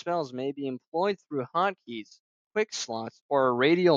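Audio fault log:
0.05–2.16 s, automatic gain rising: speech and background swell together by about 4 dB over two seconds, unlike a sudden level step.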